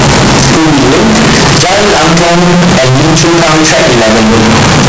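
A signed and unsigned mix-up, with 16-bit samples likely read with the wrong signedness, runs through this speech clip from start to finish. Every zero crossing turns into a full-scale leap, so the audio is harsh, heavily distorted and uniformly loud, with quiet moments as loud as the rest.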